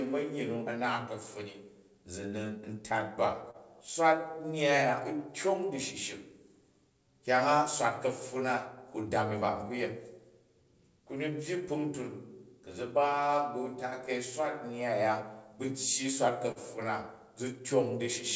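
Clock drift between sender and receiver runs through all of the speech: the sender's clock runs roughly one and a half percent slow, so the receiver's buffer keeps draining, and the receiver keeps filling gaps and stretching sound to stay fed, leaving small, irregular timing hiccups.

A short stall from a late packet follows at 3.51 to 3.57 s, right after "tat ba". The buffer ran dry, so the last sound was held for 34 ms until the packet arrived. Nothing is lost, but that sound drags.

Repeated timing corrections span 5.17 to 15.66 s. The receiver keeps inserting short repeated pieces to match the slower sender, adding roughly 150 ms in total, so the speech plays at about 99% speed.

A second short stall from a late packet hits at 16.52 to 16.59 s. The buffer emptied again and the last sound was stretched for 42 ms before playback resumed where it left off, with no sound lost. The call path, whose band ends at 8 kHz, fits a G.722 codec at 64 kbps.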